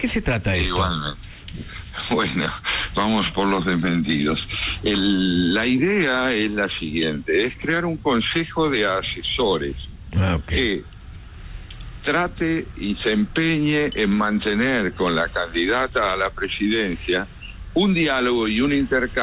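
No technical faults are audible.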